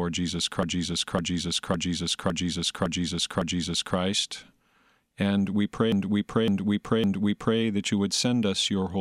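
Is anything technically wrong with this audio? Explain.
Yes. Repeated frames: a block of compressed frames was delivered more than once, so the decoder replays the same 0.56 s of speech. From 0.63 to 3.97 s it loops six extra times, adding 3.34 s. From 5.92 to 7.60 s, just before "that you", it loops three extra times, adding 1.67 s. Both are heard as a rhythmic stutter.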